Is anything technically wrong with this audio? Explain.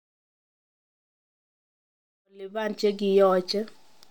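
No, the speech signal is technically sound, and the smooth fade-in that rises from around 2 s and reaches full level at 3.34 s is the kind of even, edge-free level ramp an editor would apply by hand.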